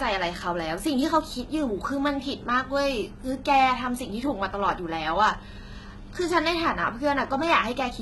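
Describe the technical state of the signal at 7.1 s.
At 7.1 s, as across the whole clip, a screen or video cable is coupling into the audio: video or display buzz at the 75 Hz field rate, with hash above it, sits about 30 dB below the speech. The treble is likely rebuilt by HE-AAC compression at a low bitrate, consistent with around 16 kbps: copied bands don't match the true harmonics, so s sounds turn gritty and metallic, with nothing above 11.8 kHz.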